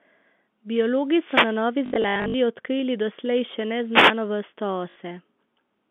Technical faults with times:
1.07-1.70 wireless microphone noise hit
1.86-2.34 packet loss with last packet repeated
3.92-4.14 wireless microphone noise hit
4.90-4.96 packet loss with last packet repeated

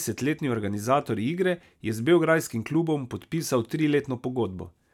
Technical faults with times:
none

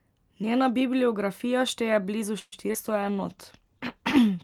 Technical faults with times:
2.39-2.54 call audio freeze
2.68-2.71 skip ahead
2.73-2.76 short concealed packet loss
2.87-4.24 call bitrate drop
2.93-4.20 jitter buffer slow-down

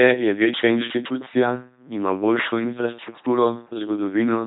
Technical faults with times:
0.00-4.47 LPC-10 vocoder

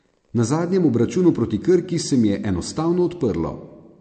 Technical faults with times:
0.00-4.00 MP3 compression

